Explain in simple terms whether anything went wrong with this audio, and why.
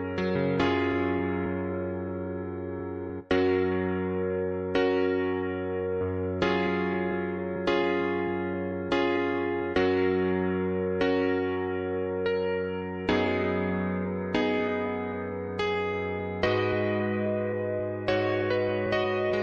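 Two things go wrong, both near the three-second mark.

At 3.09 to 3.11 s there is a skip ahead. About seven tenths of a second of sound is simply missing, and playback jumps straight to later material. Unlike a dropout, there is no silent hole or filler, just an abrupt join where the two sides meet.

Right after, from 3.20 to 4.51 s, comes a jitter buffer speed-up. The receiver had stored too much waiting audio, so it trimmed tiny slices, about a fifth of a second in total, making the sound run roughly 18% fast. Unlike a sped-up tape, the pitch stays the same. It just feels hurried.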